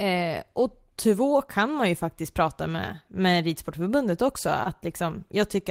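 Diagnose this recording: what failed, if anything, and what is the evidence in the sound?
The fault sits in the network stage, with repair happening at the receiving decoder: a short concealed packet loss in this speech at 4.63 to 4.67 s. About 20 ms of audio arrived too late or not at all, and the decoder bridged the gap by extending the preceding sound, pitch-continued if voiced and noise-shaped if not, before crossfading back. The result is a soft smear or wobble rather than silence. That sets it apart from a plain dropout or buffer underrun, which would leave a hard gap or click.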